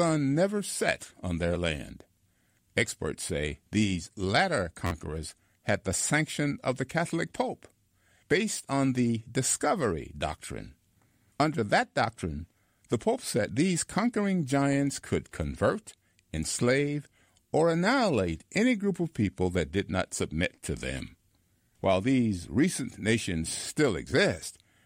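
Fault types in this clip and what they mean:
Repeated buffer: at 1.54 s, just after "never set on", and from 4.87 to 4.91 s, after "say these latter", fresh audio failed to reach the output in time, so the device replayed its previous block of about 11.6 ms, which fits a 512-sample buffer. The first event repeats once and is heard as a click, dropping roughly 10 ms of speech. The second repeats four times with hard joins, giving a brief buzzy stutter and losing around 50 ms.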